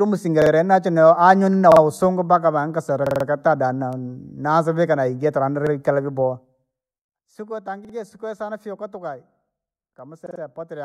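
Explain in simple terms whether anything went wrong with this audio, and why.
Two separate faults can be heard in this speech.

The first is a repeated buffer, at 0.42, 1.72, 3.07, 5.67, 7.85 and 10.26 seconds. Each time, a sliver of sound about 46 ms long plays again, once to four times over, with a hard join at each repeat, which fits a 2048-sample buffer. The new audio arrived late, so the player reused the last chunk. Nothing is skipped. The result is a quick stutter, unlike a dropout, which leaves a gap of silence.

The second is zipper noise, from 6.27 to 6.99 seconds, as the level is pulled down by a large amount. The drop happens in tiny jumps, roughly a hundred a second, and each jump adds a small click, so a fine ticking or zipping rides on the sound while it gets quieter. That texture separates it from a clean fade, which glides without any ticking.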